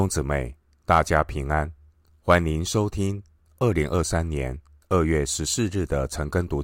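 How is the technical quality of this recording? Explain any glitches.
No technical faults are audible.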